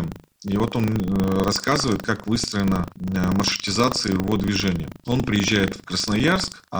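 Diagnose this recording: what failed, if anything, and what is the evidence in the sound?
A steady robotic rattle at 25 Hz runs under the speech for the whole clip and drops away in pauses. This is buffer tearing at the driver and buffer stage. Writer and reader cross inside each 40 ms period, splicing in a small slice of audio from roughly 70 ms earlier.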